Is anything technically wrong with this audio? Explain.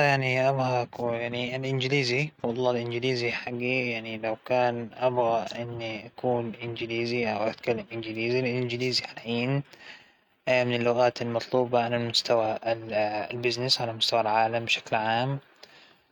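No, nothing is technically wrong with this audio.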